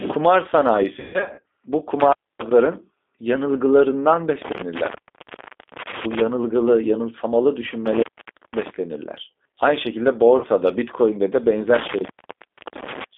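Throughout, the G.729 codec at 8 kbit/s confines the speech to roughly 250 Hz–3.6 kHz and rebuilds it from a few pulses per frame, leaving a plainly rough, synthetic edge. From 0.99 to 1.44 s, VoIP packet loss concealed by the speech codec stretches the speech into fading buzzy tones, with about 300 ms missing and the longest gap lasting 140 ms. At 2.00 to 2.51 s an intermittent contact opens, cutting the sound with crackle at each edge. The contact opens again from 4.42 to 6.21 s and from 7.86 to 8.70 s, each time dropping the sound into faint hiss. At 10.37 to 10.46 s a brief 60 ms concealment smears the speech. A final contact dropout runs from 11.74 to 13.04 s.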